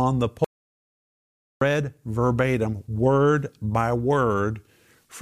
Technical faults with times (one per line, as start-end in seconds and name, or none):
0.44-1.61 audio dropout to silence